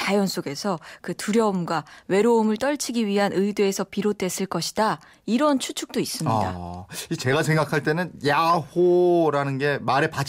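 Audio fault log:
No audible faults anywhere in this speech recording.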